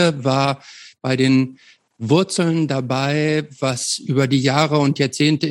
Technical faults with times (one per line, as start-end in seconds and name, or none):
none